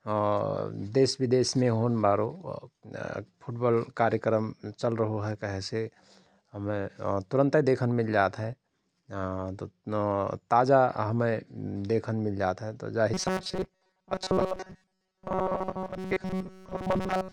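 Speech that turns into a rigid, metallic 188 Hz buzz from 13.14 s to the end, robotic sound likely from repeated short buffers of about 5 ms covering most of that stretch.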